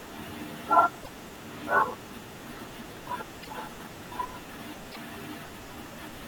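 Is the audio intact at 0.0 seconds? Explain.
Yes, the speech at 0.0 seconds is intact, with no fault audible at that moment.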